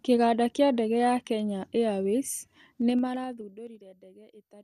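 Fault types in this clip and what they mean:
Zipper noise: the speech level drops about 25 dB in 2 dB steps, around ten per second, from 2.82 to 3.84 s, ticking audibly rather than fading smoothly.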